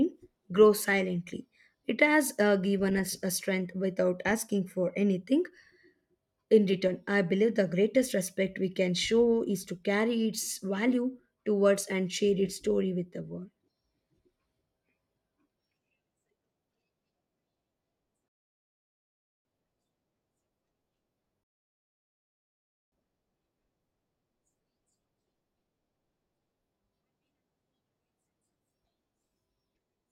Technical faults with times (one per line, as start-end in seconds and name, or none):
18.28-19.45 rebuffering stall
21.43-22.92 rebuffering stall